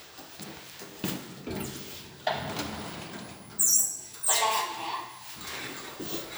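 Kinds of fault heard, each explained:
Block size mismatch (padded): From 0.53 to 1.39 s, blocks arrive short and are topped up with zeros. The repeated gaps buzz at 86.1 Hz, which fits a 512-sample read buffer. The sound runs at 0.938 times speed, with pitch near normal.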